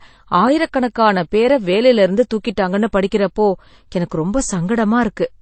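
From start to finish the speech carries stacked artefacts: nothing above 8.7 kHz, plus swirly, smeared grit layered over a second texture. That mix points to transcoding between lossy codecs, likely a low-rate MP3 re-encoded as low-rate HE-AAC, each adding damage.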